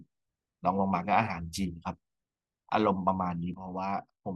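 At 3.54 s the speech falls abruptly by about 6 dB. It stays at that lower level until the clip ends at 4.35 s. The likely cause is one channel dropping out. Sound shared by both channels loses half its level in the mono sum.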